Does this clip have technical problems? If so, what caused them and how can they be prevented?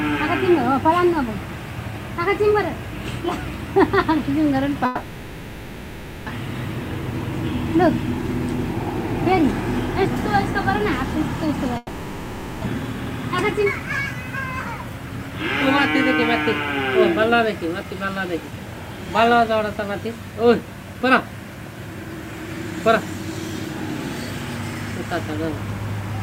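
Yes. Low bit depth without dither runs throughout: a grainy distortion that shifts with the sound and sits only around 30 dB below it. It is likely from truncating to 8 bits with no dither, so the rounding error tracks the signal. Prevent it by keeping 16 bits or more and applying dither before any reduction.

A long network dropout occurs at 4.85–6.30 s and again at 11.77–12.68 s. Each time the receiver stretches the last sound into a fading fill for about 1.4 s and 0.9 s, and the sound resumes further on, with roughly a second lost each time, likely because packets stopped arriving. Prevent it with a more stable network path, redundancy or forward error correction.

Jitter buffer speed-up follows at 13.60–14.14 s (108%), 14.83–16.16 s (104%) and 17.01–18.06 s (106%). The receiver cuts short pitch-period slices, about 50 to 70 ms per stretch, so the sound runs faster at unchanged pitch. 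Prevent it by reducing packet bunching and tuning the buffer to shrink more gradually.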